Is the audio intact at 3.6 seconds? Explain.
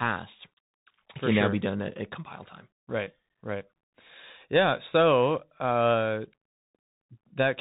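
No, at 3.6 s the speech is going through the Bluetooth CVSD headset codec, which runs the whole clip. Its one-bit up-or-down steps with adapting size track the wave while nothing above 4 kHz passes, and s sounds turn scratchy over a granular hiss, which fits a 64 kbps link.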